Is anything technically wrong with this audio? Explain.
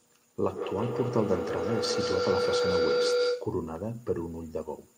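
Yes, there is feedback howl from 0.45 to 3.67 s. Two devices in the same room appear to be on one call, so sound from one loudspeaker reaches the other microphone and comes back louder on each pass. Instead of dying away, the repeats build and narrow into a tone near 500 Hz that pulses roughly every 150 ms, the loop's round-trip delay. At its peak it rises about 3 dB above the speech.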